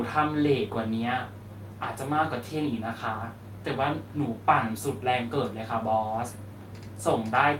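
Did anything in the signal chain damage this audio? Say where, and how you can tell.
Yes. At about 1.83 s in this speech, the network stage caused a lost packet rebuilt from error correction. The packet went missing, and the decoder filled the slot with a low-bitrate copy carried in the next packet. As a result there is no dropout, just one rough, noisy 20 ms stretch, which points to a single lost packet. The waveform stays continuous with no gap. On a spectrogram, that one frame looks grainier and blurred, with less defined harmonics.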